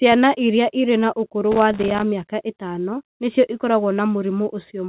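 Loose connector crackle runs from 1.52 to 2.02 s, starting right after "iria irĩ na ũkũrũ" and clearing before "mĩaka ĩtano nĩcio ikoragwo". A worn or dirty contact is rapidly making and breaking, chopping the speech into an irregular burst of scratchy crackle. The crackle sits within the narrowband call sound, which has nothing above 4 kHz, consistent with a G.711 mu-law link.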